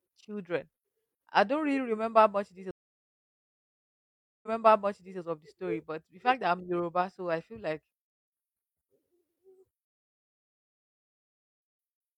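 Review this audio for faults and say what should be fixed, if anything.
Stream reconnect at 2.71 to 5.20 s and 9.85 to 11.36 s: the connection dropped, the speech went silent for 1.72 s and 1.51 s, and a fresh decoder restarted mid-stream, replaying 0.77 s first, then skipping roughly 1.5 s. Buffering more audio ahead and resuming from the last played position on reconnect would prevent it.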